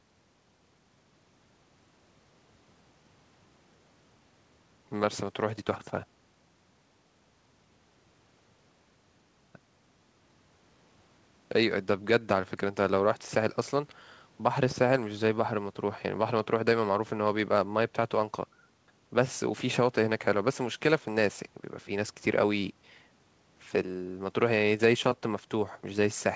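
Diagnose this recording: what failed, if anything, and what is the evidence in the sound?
Nothing failed in this recording, and the sound gives no evidence of a fault beyond the call path's normal ceiling, with nothing above 8 kHz.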